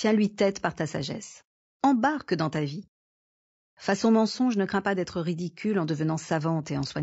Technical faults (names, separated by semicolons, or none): low-delay AAC compression